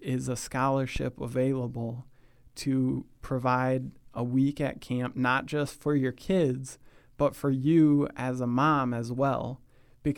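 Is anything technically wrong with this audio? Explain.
Yes. From 0.96 to 1.02 s there is a phantom power thump: a supply switching on the live input pushes a voltage step through the coupling capacitors, giving a deep thud peaking about -20 dBFS and decaying within 12 ms.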